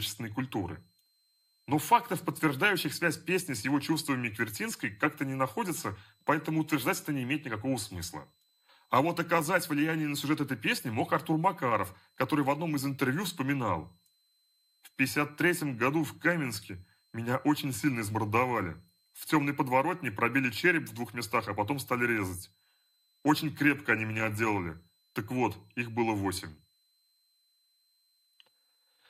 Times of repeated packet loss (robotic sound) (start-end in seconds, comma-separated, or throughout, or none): none